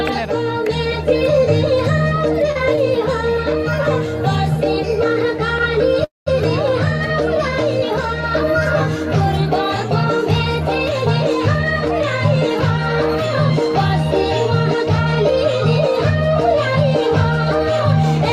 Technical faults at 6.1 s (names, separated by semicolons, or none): call audio freeze